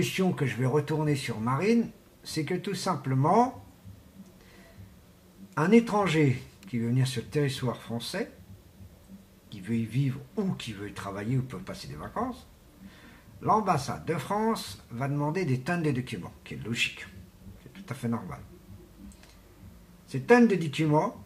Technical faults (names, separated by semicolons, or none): none